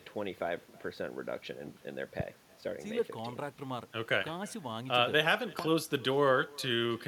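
Throughout the speech there is echo with no canceller: every phrase returns roughly a third of a second later as a faint, thin copy about 26 dB below the original. The far end is playing the call over a loudspeaker, its microphone is catching it, and nothing subtracts that signal before it travels back. Room reverberation would smear directly into the tail of each sound. This delayed copy instead stands apart as a distinct, late shadow.

At 2.20 to 2.22 s and again at 5.59 to 5.61 s, a single loud pop cuts through, reaching somewhere around 15 dB above the speech. Each is a short, sharp thump while the speech keeps running underneath it without a break. That continuity separates it from a dropout or a clipped peak. The likely cause is a brief voltage spike, from static, a connector or a driver hiccup, entering the chain and being shaped into a click by the circuitry that follows.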